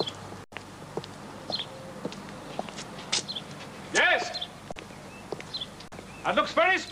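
At 0.44 s the sound suddenly freezes into a flat, held level for 80 ms and picks up again at 0.52 s. This is an underrun with held sample: the output buffer ran empty and the converter held its last value, and most of that stretch of live audio was dropped.

At 3.76 s there is a brief glitch lasting about 36 ms. Damaged data in a compressed stream caused the decoder to misread frames, lose sync and hunt for the next frame header.

The same held-sample underrun returns at 4.72 s and 5.88 s. Each is a 40 ms flat hold, with roughly that much audio missing.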